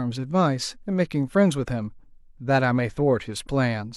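A speech recording with no technical fault audible anywhere in it. There is nothing here that calls for a time or a cause.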